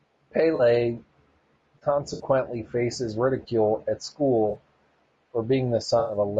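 AAC frame loss with concealment hits this speech at 0.55–0.61, 2.13–2.23 (just before "faces ridicule at"), 4.49–4.55 (just after "faces ridicule at") and 5.99–6.17 s, where the decoder rebuilds missing frames from the last good spectrum, leaving smeared, noisy patches of 40–100 ms. Low-delay AAC compression runs throughout: the voice is rough and grainy, with noise between harmonics, the likely result of AAC-ELD's short frames at a rate that sounds around 32 kbps.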